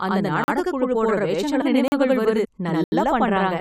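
From the very start, the whole speech clip has a channel delay (doubling): one side runs about 85 ms behind the other, and once they're folded to mono you hear that late copy as a distinct slap right behind every syllable, at the same level. A lag that size fits a 4096-sample buffer, so one channel's path probably picked up an extra buffer's worth of latency that the other didn't.

At 0.44 s there's the first block of digital silence, a 40 ms hole where the signal drops straight to silence and comes back with no fade, heard as a short gap. That points to the output buffer not being filled in time, with zeros going out instead.

At 1.61 s there's a brief blip from damaged data in a compressed stream. A stretch of the encoded data was corrupted, the decoder misread those frames and had to resync, and what comes out is a brief disruption rather than speech.

Another 40 ms block of digital silence hits at 1.88 s, with the same hard cut out and back as the first.

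At 2.44 s the damaged data in a compressed stream shows up again, about 20 ms of disruption while the decoder hunts for its next good frame.

Finally, at 2.84 s there's a longer block of digital silence, 80 ms this time, long enough to register as a real dropout in the speech.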